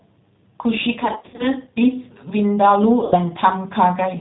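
Throughout the speech, the sound has the rough, slightly synthetic quality of the G.729 codec, which fits its 8 kbit/s mode. The decoder rebuilds each 10 ms frame from a vocal tract filter, a pitch predictor and a few pulses, so fine detail is replaced by a buzzy approximation and the damage is plainly audible. On a spectrogram the energy stops at a hard ceiling at 4 kHz, with smeared harmonics below it.

From 1.0 to 1.48 s, VoIP packet loss concealed by the speech codec breaks up the sound. Dropouts totalling about 210 ms are scattered across roughly 380 ms, the longest run about 60 ms. In each gap the decoder repeats its last pitch and filter at falling gain, so the sound stretches into a buzzy tone or coloured noise that fades, and stays weak as packets resume. The waveform shows repeated identical cycles under a sagging envelope, and the spectrogram shows flat, frozen harmonics. A shorter concealed loss of about 80 ms from 3.04 to 3.17 s produces the same brief stretched, fading sound.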